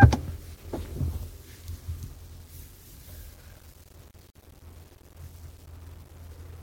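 Throughout, grainy distortion tracks the sound itself, sitting roughly 25 dB below it and thickening as levels fall. This is likely low bit depth without dither, consistent with about 9-bit rounding, and unlike steady hiss it vanishes whenever the sound does. From 4.31 to 4.35 s, a 43 ms gap at a join of encoded pieces cuts the sound with smeared edges. Encoder delay and last-frame padding were left in, and the sound resumes where it stopped rather than skipping ahead like a dropout.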